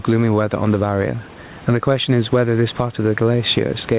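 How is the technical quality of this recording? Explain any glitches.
The big issue is gain pumping, running through the whole speech clip. The room noise sits about 30 dB under the voice, and nothing comes through above 4 kHz, which fits a narrowband call codec like G.711 mu-law.

Gain pumping: across the whole recording, the gain keeps getting pulled down on loud sounds, with a swing of about 15 dB. The likely cause is mic gain set way too hot, with a fast limiter clamping every peak, so everything sounds squashed.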